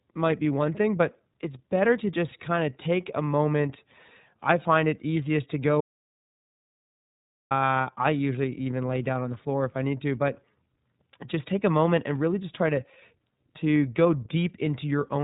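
Throughout, the speech sounds narrow and slightly rough, with a synthetic edge and nothing above about 3.8 kHz. That is iLBC codec damage, plainly audible: each short frame, consistent with the codec's 30 ms mode, is coded on its own and discarded upper frequencies never return. At 5.81 s, right after "find it easiest to", the audio drops out to complete silence with no room tone, resuming at 7.51 s with "I usually even lay". About 1.7 s is gone, likely from the input being lost while silence was written.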